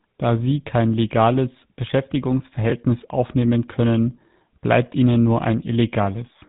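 From start to finish, the speech carries the damage of the GSM full-rate codec. Nothing above about 3.8 kHz gets through, so the top end sounds dull and boxed in. The codec rebuilds the voice from a vocal-tract model driven by sparse, evenly spaced pulses. Much of the fine excitation detail is thrown away. The result is a plainly audible buzzy, gravelly roughness over every phrase, which fits the 13 kbps full-rate scheme.

From 2.70 to 2.72 s, just before "aufnehmen können bleibt ihnen", there is a brief spell of chunks out of order. One short chunk of about 5.8 ms arrived late and plays three chunks after its proper place. No audio is missing, but the sequence is scrambled. The wrong order leaves three hard joins, heard as a tiny garbled stutter.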